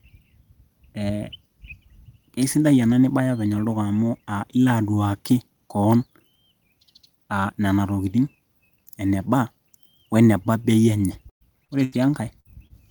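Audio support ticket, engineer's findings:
Burst of packet loss, three events in the last two seconds. 11.29–11.43 s: about 120 ms dropped, the last sound held and fading to near silence for roughly 100 ms, then resumes mid-stream. 11.84–11.94 s, after "enye ore": about 80 ms lost, concealed by a decaying tail. 12.40–12.47 s, after "enye ore" again: about 40 ms gone, a 51 ms fade. Jitter buffer/network path, consecutive packets missed. Unlike the short losses, an audible fade and a skip forward.

Short concealed packet loss, two events. 11.65–11.70 s: about 40 ms missing, a brief smear where the decoder extrapolated the last pitch or noise and cross-faded back. 12.67–12.72 s: about 20 ms, a quick wobble. Same receive path, late or lost packets. Distinguishing point: no decay toward silence and no skipped stretch, just a momentary blur that can swallow a consonant.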